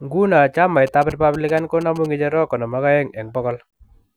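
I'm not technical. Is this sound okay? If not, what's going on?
No. From about 0.87 s to 2.06 s the speech has GSM signalling bursts running underneath it: a galloping dit-dit-dit of short buzzes, quieter than the speech. A 2G mobile phone near the recording gear sent brief groups of radio pulses, as it does when signalling the network. The audio circuitry picked these up and turned them into sound, so the buzz repeats at the phone's pulse rate of about 217 times per second.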